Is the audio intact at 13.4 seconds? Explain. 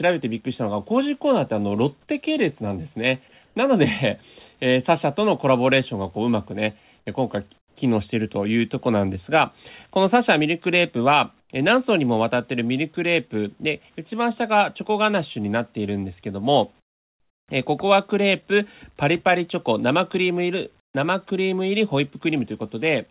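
Yes, the speech at 13.4 seconds is intact: it plays through cleanly with no dropout, glitch or distortion, and the band limit of the call path is audible, with nothing above 4 kHz, as the telephone-grade codec allows.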